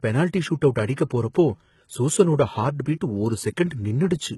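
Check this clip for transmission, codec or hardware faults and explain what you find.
There's one codec fault, and it runs through the whole speech clip: HE-AAC compression, likely. The treble is rebuilt from copied lower bands rather than coded, so s sounds come out gritty and metallic, nothing sits above 11.8 kHz, and the heavy damage fits a bitrate around 16 kbps.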